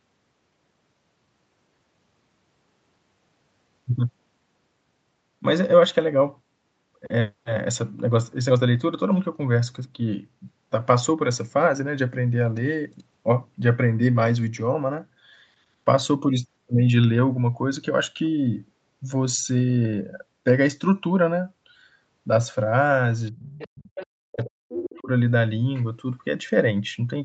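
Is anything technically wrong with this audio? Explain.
Yes, there are two related problems, both near the end of this speech recording.

Speech suppressed in double talk shows up at 23.3 to 23.53 s and again at 24.29 to 25.09 s. The talker dips, sinking by roughly 40 dB at worst. The likely cause is an echo canceller that couldn't separate the talker from the far end's loudspeaker echo, so it turned both down.

The other side's voice is leaking through from 23.39 to 24.06 s, then at 24.32 to 24.48 s and 24.72 to 25.02 s. A second voice sits about 20 dB under the talker, rising to about 10 dB under in the last stretch. It's likely loudspeaker playback the echo canceller didn't fully remove.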